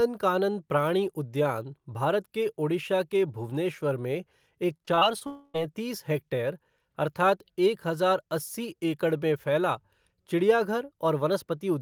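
Repeated packet loss (robotic sound) runs from 4.77 to 5.23 s: five short gaps, the longest 24 ms, are patched by repeating prior sound, giving choppy speech. A long network dropout is the likely cause of the 5.27 to 5.56 s stretch, where concealment stretches the last sound into a fading buzz until "हेक्टेयर अर्थात् एक हजार" resumes.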